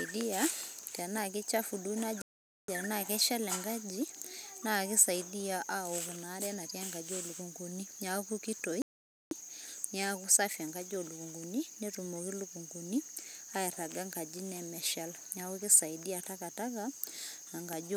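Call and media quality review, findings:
Playback stall, 2.22–2.68 s: speech cuts out for about 0.47 s. Likely player buffer underrun or blocked output thread. Output held silent until data resumed. Waveform shows a flat silent gap; spectrogram a clean full-band blank column.

Playback stall, 8.82–9.31 s: second dropout of about 0.49 s, same signature. Flat trace, hard edges on both sides, no fade or fill. Likely the same starved or stalled playback path.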